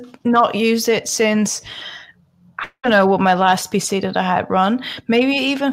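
At 2.63 s the speech breaks off until 2.86 s, likely a long network dropout. The last sound gets stretched into a fading buzz for about 0.2 s, then 60 ms of silence, and it picks back up with 200 ms missing.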